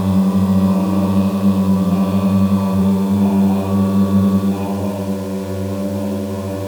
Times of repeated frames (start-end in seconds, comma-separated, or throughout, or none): none